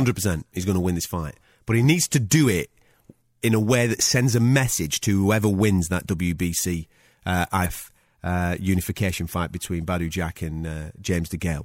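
Damaged data in a compressed stream appears from 7.62 to 7.66 s, just before "uh unification fight between". For about 44 ms some of the encoded bytes are wrong, either lost, zeroed or overwritten. The decoder misreads or rejects the affected frames and loses sync. It then scans forward until it finds the next valid frame header. This brief breakdown is heard as a short chirp or blip cutting into the speech before normal decoding resumes.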